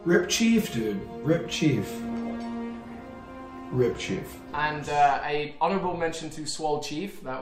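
No faults can be heard anywhere in this audio.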